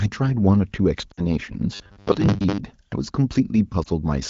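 Speech clip with lost AMR speech frames at 1.12 to 1.24 s and again at 3.83 to 3.88 s. In the first run the sound smears and sags for about 60 ms, which fits three lost 20 ms frames concealed by repeating the last good pitch and vocal tract settings at falling gain. The second is a brief dip that fits one lost frame. Between 1.75 and 2.58 s the sound turns into a rigid metallic buzz at 100 Hz, robotic sound from repeated short buffers. It is likely caused by late-arriving audio being padded by looping the last 10 ms, with roughly half the span repeated rather than real. Across the clip the wideband HD Voice coding itself sounds clear, with only light codec colouring.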